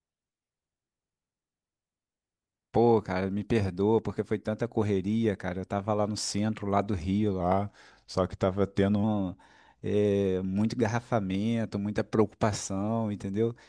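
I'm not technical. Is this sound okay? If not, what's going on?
No. From 7.40 to 9.04 s a wrong sample rate makes the speech about 8% slower and slightly deeper, consistent with 24 kHz audio played at 22 kHz. Speed and pitch drop together, unlike a simple slowdown.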